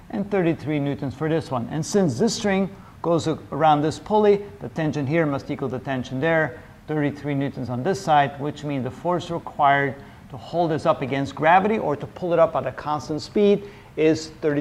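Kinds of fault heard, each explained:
No faults detected in this audio.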